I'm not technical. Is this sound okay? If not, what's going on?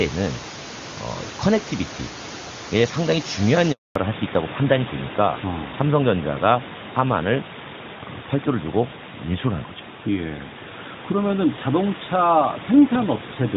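No. At 3.72 s the voice cuts out completely for about a quarter of a second, until 3.96 s. This is a handover gap: the phone switched the call from one network to another, and no sound arrived while it changed over.

From 3.96 s to the end, the voice turns duller, muffled and rougher. This is a fallback to narrowband: after the switch, the call dropped out of HD Voice into an older phone format that removes everything above 4 kHz.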